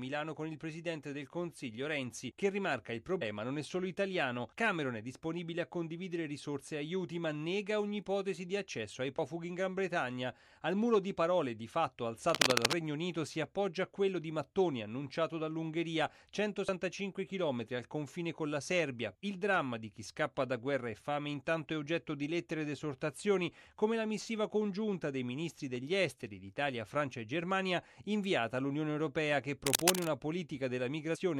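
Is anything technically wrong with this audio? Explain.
Yes. Compressed frames skipped at 3.21 s, 9.17 s, 16.67 s and 31.14–31.16 s: whole frames are dropped, so the audio jumps ahead by roughly 100, 70, 200 and 100 ms, which fits 23.2 ms frames.

Cable scratch noise from 12.14 to 12.76 s and 29.67 to 30.07 s: dense, uneven scratching bursts, first about 5 dB above the sound, then roughly level with it, likely from a worn cable or connector being moved.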